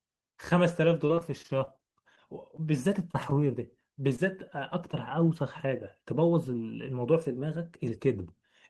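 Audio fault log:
0.73 to 3.41 s, scattered short gaps. About fifteen packets went missing or arrived late across this stretch, none much longer than 20 ms, adding up to 160 ms of lost audio. The receiver covered each hole by extending the preceding sound, so the speech stays clear but picks up brief ticks, smears and hiccups.
4.16 to 4.20 s, 4.50 to 4.53 s and 4.92 to 4.95 s, short concealed packet loss. Each time, 20 ms of audio failed to reach the decoder in time. Concealment extended the previous sound for 16, 12 and 13 ms before blending back, which leaves three brief smears or ticks.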